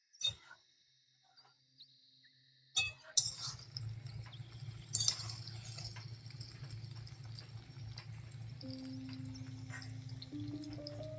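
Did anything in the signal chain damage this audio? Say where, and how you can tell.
No, nothing stood out on listening that would point to damage at any stage of the chain.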